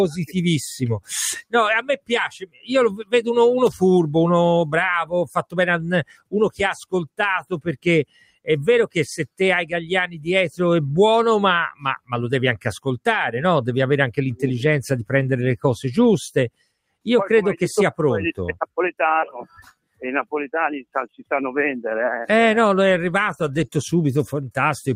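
From the start the level pumps and flutters. Sustained parts and decaying tails sink while sharp onsets come through, so the sound keeps thinning out and swelling back, with the overall swing around 10 dB. This is a noise suppressor applied to music or sounds: a processor tuned for speech treats steady tones, ambience and reverberant tails in this material as background noise and keeps pulling them down, leaving the attacks largely untouched.

At 1.89 to 2.11 s, 2.35 to 2.7 s, 6.05 to 6.34 s, 8.05 to 8.48 s, 10.07 to 10.27 s, 11.74 to 12.12 s, 16.5 to 17.06 s and 19.45 to 20.01 s, the sound briefly drops away, each time for a few tenths of a second. Most of these dips go down by about 21 dB. The one at 8.05 s drops about 19 dB, and the one at 10.07 s only about 9 dB. Each is sound cut by the noise suppressor: it judged these stretches to be noise and clamped them harder than everything else.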